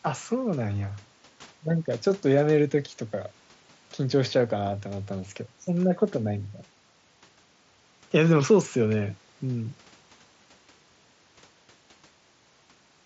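No technical faults can be heard in the speech, which carries the wideband character of a Bluetooth headset link working as intended, consistent with the mSBC codec.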